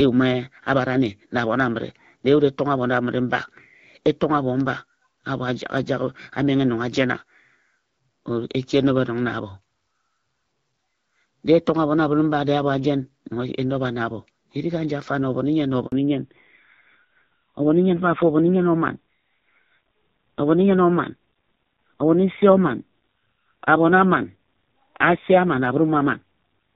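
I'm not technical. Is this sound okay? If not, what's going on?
No. At 15.86 s, just after "nnyen na", a handover gap occurs: the call switches networks, and the sound cuts out completely for about 60 ms.

From 15.92 s to the end, the call makes a fallback to narrowband, dropping to an older phone codec. Everything above 4 kHz disappears, so the speech sounds duller, muffled and rougher.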